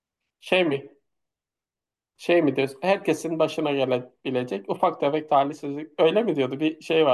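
No technical faults can be heard in this recording.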